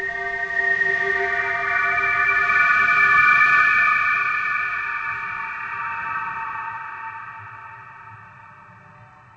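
No technical faults are audible.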